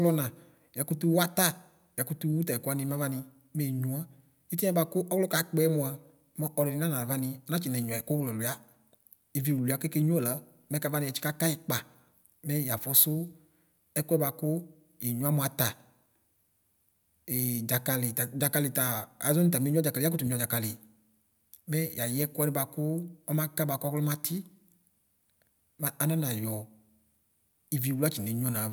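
Nothing stood out as a technical problem on listening to this speech recording.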